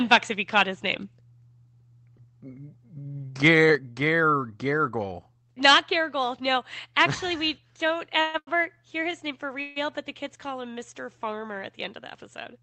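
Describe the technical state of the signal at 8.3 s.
At 8.3 s the speech is inside a call audio freeze running from 8.21 to 8.36 s. Packets were likely held up in transit, so the jitter buffer ran dry and the receiver kept extending the last sound for about 130 ms, a fading buzz rather than silence. Nothing is lost, but 130 ms of delay gets inserted. On a spectrogram the harmonics smear into flat horizontal bands that dim toward the end. The waveform shows a repetitive, decaying stretch instead of changing speech.

Right after it, from 8.38 to 8.49 s, comes a short stall from a late packet. The next packet again missed its slot, and the receiver held the preceding sound for about 91 ms until it arrived, then resumed at the same point. To the ear one sound lingers too long with a slight buzzy dip. A spectrogram shows a brief frozen, horizontally stretched patch. In the waveform a periodic segment repeats with slightly lower level. 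Both events sit on an Opus call path whose spectrum stops near 8 kHz.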